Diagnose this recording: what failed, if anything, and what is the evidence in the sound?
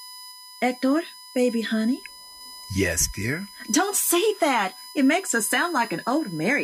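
A steady whine on 1 kHz, loudest at 5 kHz and roughly 20 dB down, runs throughout: USB whine, bus frame current leaking into analogue ground.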